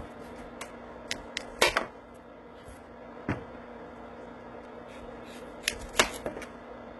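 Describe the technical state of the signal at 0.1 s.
At 0.1 s, as throughout, the treble is gritty and metallic and stops near 11.8 kHz, likely HE-AAC compression at a low bitrate around 16 kbps. The top band is replicated from lower harmonics, unlike a plain low-pass that leaves it dull.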